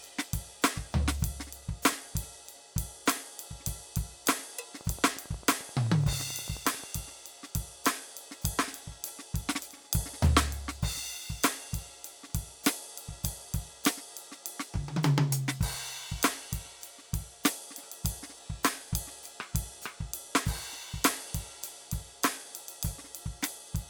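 A train of clicks runs through this music from 4.81 s to 6.85 s: a regular ticking at about 11.3 clicks per second, around twenty pulses of near-identical shape, each poking roughly 5 dB above the music. The steady spacing and uniform shape point to something outside the music injecting a repeated impulse. The likely cause is electrical interference from nearby equipment or a faulty connection or power supply.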